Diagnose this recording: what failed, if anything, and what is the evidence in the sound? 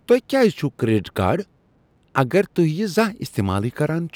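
Nothing failed in this speech recording, and there is no evidence in the sound of a problem at any stage. Nothing audible points to trouble anywhere from the analogue side through to playback.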